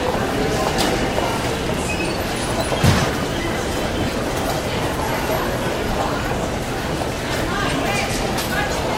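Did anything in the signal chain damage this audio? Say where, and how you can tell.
Yes, there's one spot, and it's in the streaming side, where segments get stitched back together for playback. At about 7.77 s there's a tiny skip: roughly 14 ms of audio simply goes missing and the waveform jumps across the gap. That's an overlap between stream segments. Two roughly 1 s chunks claimed overlapping time stamps, so the player trimmed what it thought was duplicate sound, but that material wasn't actually doubled.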